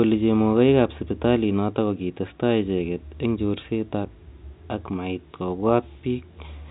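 The speech comes over the narrow band of ordinary G.711 telephone coding, with nothing above 3.8 kHz, and no technical fault can be heard anywhere in it.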